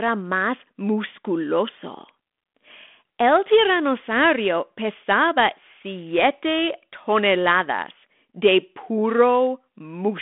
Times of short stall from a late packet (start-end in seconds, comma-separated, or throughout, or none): none